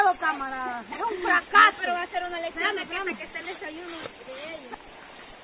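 No faults heard; content stops at 4 kHz, as expected from a narrowband call path that points to G.711 mu-law at 64 kbps.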